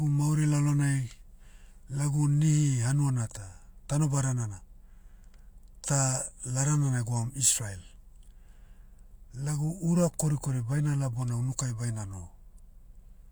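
No technical faults can be heard anywhere in the recording.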